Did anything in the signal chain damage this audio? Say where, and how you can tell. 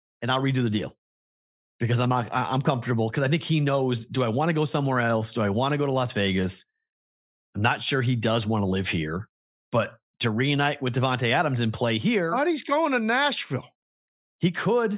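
No, nothing in the signal chain audibly damaged this speech recording, and the signal holds continuity at every stage from capture through playback.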